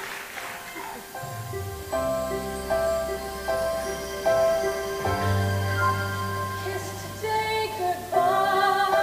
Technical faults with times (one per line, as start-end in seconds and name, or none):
0.00-9.03 low bit depth with dither